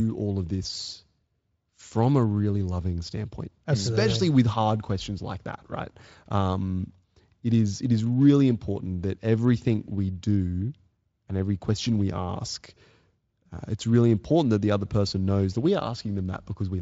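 No audible technical faults.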